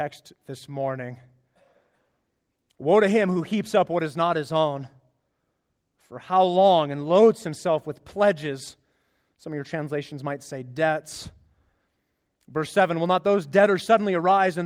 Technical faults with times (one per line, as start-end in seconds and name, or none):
none